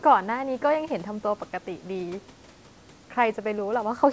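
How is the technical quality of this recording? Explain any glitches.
The technical quality of this recording is sound, with no glitches to explain.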